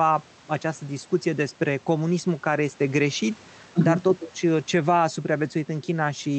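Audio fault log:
Throughout, gain pumping: a gain swing of around 5 dB and flattened dynamics, likely from input gain set too high and a fast limiter pulling down every peak.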